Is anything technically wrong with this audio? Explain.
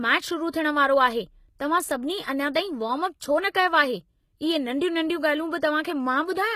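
Yes. The speech carries plainly audible codec damage throughout, and one attack is smeared by pre-echo.

For the whole clip, the treble sounds synthetic rather than natural. Sibilants come out gritty and metallic, and nothing is present above about 14.9 kHz. This points to HE-AAC compression as the likely cause, at a bitrate that fits around 20 kbps. The codec keeps the lower spectrum and rebuilds the top by copying lower bands upward under a coarse envelope. The harmonics therefore fail to line up above the crossover.

From 3.50 to 3.55 s there is pre-echo. A short hiss spreads over about 47 ms just before a sharp attack, and the attack itself sounds softened. The transform codec spreads its quantisation noise across a whole block. Noise sized for the loud onset also fills the quiet gap ahead of it.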